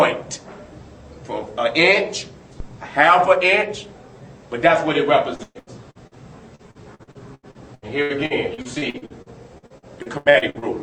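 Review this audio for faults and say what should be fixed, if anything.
A phantom power thump sits at 2.60 to 2.71 s: a low-frequency step from a supply being switched on a live input, passed through the coupling capacitors and decaying over about 24 ms. Prevent it by muting the channel before switching phantom power.

Repeated packet loss (robotic sound) runs from 5.35 to 6.14 s, with five gaps totalling 320 ms (longest 120 ms, 41% of the span concealed), and again from 6.55 to 10.65 s, with 26 gaps totalling about 1.2 s (longest 83 ms, 29% concealed). Each hole is patched by extending the preceding sound, so the audio turns choppy with pieces missing. Prevent it with a more stable network path and a larger jitter buffer.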